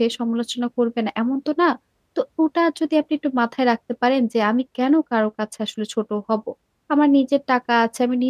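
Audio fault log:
Nothing in this speech recording stood out as a problem on listening.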